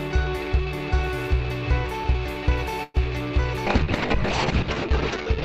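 At 2.83 to 2.97 s the sound stalls into a brief fading buzz, then resumes where it left off: a call audio freeze, likely from delayed packets draining the jitter buffer, adding about 108 ms with nothing lost. From 3.68 s to the end the audio turns rough and muffled, a call bitrate drop from 96 to 6 kbps that narrows bandwidth from 20 kHz to 8 kHz, bottoming out for 1.3 s.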